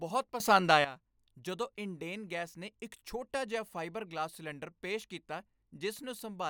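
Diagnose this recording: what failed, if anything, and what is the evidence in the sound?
A sudden gain jump hits the speech from 0.4 to 0.85 s. Level rises by about 12 dB in one step, and the background noise rises with it. That points to a digital gain stage. A gain setting was likely applied without a ramp, then reverted.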